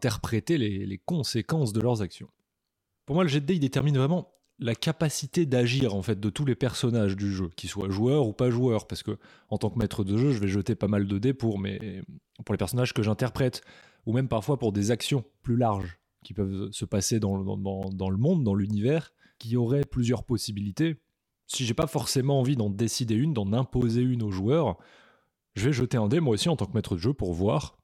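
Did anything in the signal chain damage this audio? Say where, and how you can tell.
Yes: periodic USB or driver dropouts at the driver/buffer stage. Ticks every 2.0 s from 1.81 to 25.81 s, where the bus stalls and roughly 10 ms of audio drops to silence.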